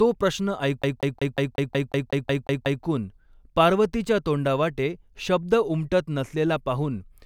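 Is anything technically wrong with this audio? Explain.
Yes. From 0.82 to 2.84 s the speech stutters rapidly, the same 0.18 s fragment repeating eleven times with a brief mute at each jump. This is a CD stuck on one turn: a scratch knocks the laser back one track every revolution.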